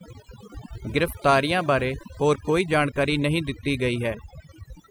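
Speech with overdone noise removal running throughout: an overly aggressive noise reducer has pulled individual frequency bands down wherever they sat near its noise estimate, leaving near-silent gaps with twinkling specks. On a spectrogram this appears as isolated flickering blobs scattered across otherwise black pauses.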